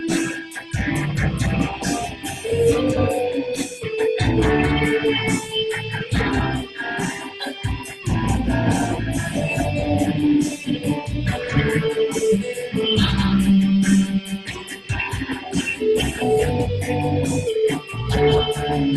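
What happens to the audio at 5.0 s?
Nothing goes wrong at 5.0 s; the audio runs straight through that moment with no dropout, click or glitch, carried as usual by the call path's codec.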